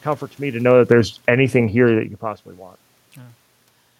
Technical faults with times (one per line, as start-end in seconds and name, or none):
0.52-2.12 automatic gain falling